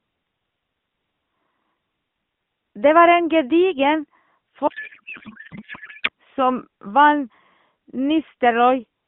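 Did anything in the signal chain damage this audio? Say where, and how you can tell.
Yes. A codec payload misread runs from 4.68 to 6.09 s: the speech turns to garbled, warbling noise that barely tracks it. It arises at the codec stage, where octet-aligned AMR frames are parsed as bandwidth-efficient, shifting every field, until both ends agree on packing again.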